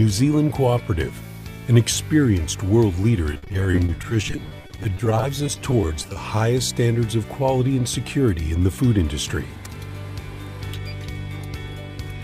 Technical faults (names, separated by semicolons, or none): repeated packet loss (robotic sound)